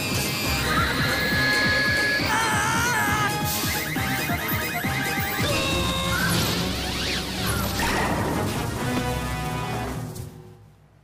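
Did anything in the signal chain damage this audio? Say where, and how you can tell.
Yes: loudspeaker feedback squeal from 0.37 to 2.23 s, in the acoustic path between microphone and loudspeaker. A single 1.7 kHz tone swells over about a second to roughly 5 dB above the signal, as loop gain above one at that frequency kept reinforcing itself.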